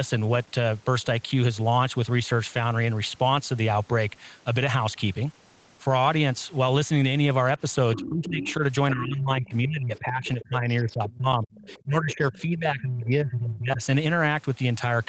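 At 7.95 s a second voice cuts in under the speech. It runs to 8.54 s, only about 10 dB below the main talker. This is the other side's voice leaking through. The far end likely played on a loudspeaker, and the echo canceller left part of it in the microphone signal. At the same moment, from 7.95 to 8.62 s, the speech itself sinks by about 20 dB. That is speech suppressed in double talk. With both voices present, the canceller likely could not tell them apart and turned everything down.

A longer stretch follows from 8.93 to 13.82 s. The speech drops in pieces, by up to about 25 dB, for roughly four seconds in total. The leaked voice keeps surfacing through it. There is a faint scrap at 9.46 s, far below the speech. A clearer passage runs from 9.96 to 11.16 s, about 20 dB down, and a weaker one from 11.51 to 13.04 s, about 25 dB down. Both voices are limited to the call path's 8 kHz bandwidth.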